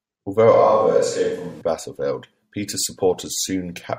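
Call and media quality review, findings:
Speech abruptly roomy, hollow and bass-light at 0.54–1.61 s; level about unchanged. Likely switch to a distant microphone after the close-mic signal dropped, then sudden return.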